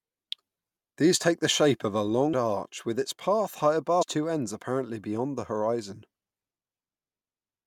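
At 2.32 s, between "the shape of a" and "arch with its path", and again from 4.01 to 4.03 s, between "with its path high" and "two ends apparently beyond", the speech is hit by damaged data in a compressed stream. Corrupted bytes make the decoder misread frames and lose sync until it finds a valid header, producing a brief chirp or blip. A spectrogram shows a short, broadband vertical smear; the waveform shows a tiny discontinuity.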